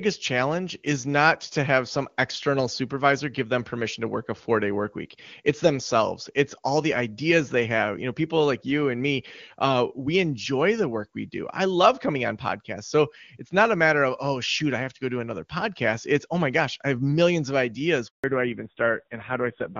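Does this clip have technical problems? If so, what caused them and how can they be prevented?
Yes. From 18.08 to 18.24 s there is a handover gap. The call was moved between networks, and for about 160 ms no speech frames reached the receiver. The sound fades within a few tens of milliseconds and stays silent until the new link carries audio, so whatever fell in that window is simply gone. A packet-loss dropout tends to be shorter and scattered or concealed with smeared filler. This is one clean hole at a network switch. Keeping the device on a stable cell or Wi-Fi link, or using networks with make-before-break handover, prevents it.

Right after the gap, from 18.24 s to the end, comes a fallback to narrowband. Before it, the HD Voice codec sounds clean, which fits a high AMR-WB rate. Afterwards nothing above 4 kHz survives, and the speech turns dull and rougher, pointing to a low-rate AMR-NB mode. 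A simple low-pass filter would dull the sound without adding roughness. Here the bandwidth loss begins exactly at the handover and comes with coarser coding, which marks a codec switch. Making sure both networks and the far end support AMR-WB end to end prevents this.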